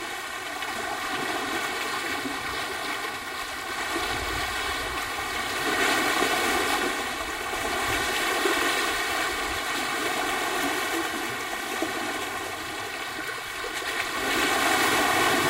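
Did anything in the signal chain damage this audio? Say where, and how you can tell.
Yes, there's channel delay (comb filtering) throughout, likely from a driver or buffer stage that left one channel about 3 ms late before the mono sum. The whole clip sounds hollow and phasey, with fixed notches starting around 200 Hz and repeating at evenly spaced frequencies.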